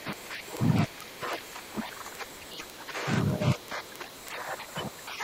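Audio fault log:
0.13–5.21 s: word clock ticks. A steady train of short, sharp clicks of uneven strength runs under the speech, roughly twenty per second and around a hundred in all. The receiving device is reading a digital input on its own free-running clock rather than locking to the sender. Each time the two clocks slip past each other, a single sample is dropped or repeated. The tick rate points to a mismatch of around 400 ppm between the clocks.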